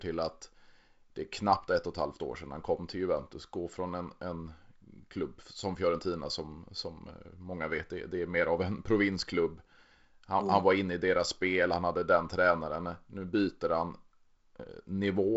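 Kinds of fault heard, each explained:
No faults are heard: the speech carries the normal character of G.722 wideband telephone coding at 48 kbit/s, with its light coding texture and nothing above about 7.7 kHz.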